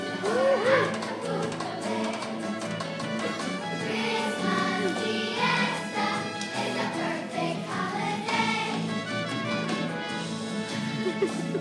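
No technical faults are audible.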